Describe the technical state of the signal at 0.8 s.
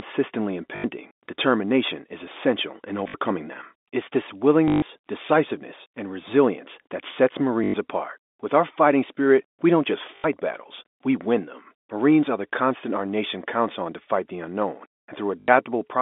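At 0.8 s there is packet loss with the last packet repeated, from 0.76 to 0.84 s. About 80 ms of audio is missing, likely four 20 ms packets. The receiver replays the final good packet, so the run buzzes briefly near 50 Hz.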